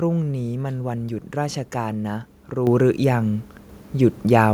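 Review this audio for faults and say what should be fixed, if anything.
At 2.67 s the microphone volume stepped up by about 6 dB, as software raised the input gain at once, lifting speech and background together. Prevent it by fixing the device input level and disabling automatic microphone adjustment.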